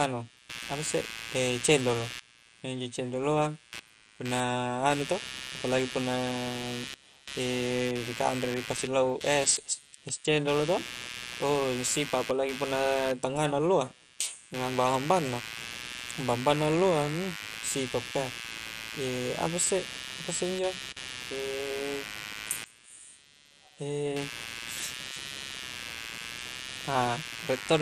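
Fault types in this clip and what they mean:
Computer activity noise: interference from processor and peripheral load leaking into the audio ground, heard throughout as a buzzy, scratchy layer pulsing around 100 times a second, roughly 10 dB below the speech. A spectrogram shows evenly spaced vertical ticks unrelated to the speech.
MP2 compression: the dull, gurgling graininess heard throughout likely comes from MPEG Layer II coding at a low rate, consistent with 64 kbps, where starved sub-bands drop out. A spectrogram shows a hard ceiling with nothing above 14.2 kHz and flickering, blocky patches in the upper bands.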